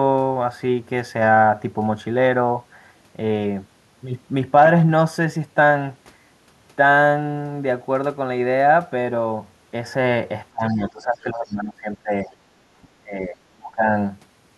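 Speech suppressed in double talk occurs from 10.51 to 12.33 s and again from 13.01 to 13.93 s. The speech sinks by around 20 dB in the first stretch and around 25 dB in the second, dipping for most of each span. The likely cause is an echo canceller that heard both ends talking at once, could not tell this talker from the returning loudspeaker echo, and turned the whole signal down.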